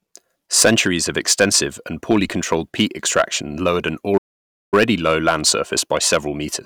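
Hard clipping runs through the whole speech clip: peaks overdriven by about 8 dB are cut flat on under one percent of samples, adding crackly high harmonics on loud syllables. From 4.17 to 4.74 s a playback stall drops the sound to silence for roughly 0.55 s before it resumes, most likely because the player ran short of data.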